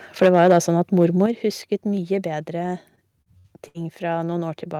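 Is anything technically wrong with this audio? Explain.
Yes, there are three kinds of fault.

Microphone overload, at 0.22–0.58 s and again at 1.02–1.05 s: peaks reach about 6 dB and then about 1 dB past full scale, likely from excessive input gain. The waveform shows flattened tops, and the spectrogram shows broadband splatter. The result is harsh crackle.

Microphone volume stepped down, at 0.26 s by about 2 dB and at 1.26 s by about 6 dB: these are likely automatic gain reductions reacting to the overload. The waveform envelope drops abruptly, and speech and background both sound suddenly quieter.

Repeated packet loss (robotic sound), from 2.95 to 3.78 s: four gaps are patched by extending earlier audio, with the longest lasting 63 ms and about 22% of the span concealed. The spectrogram shows smeared, repeated frames. It sounds choppy.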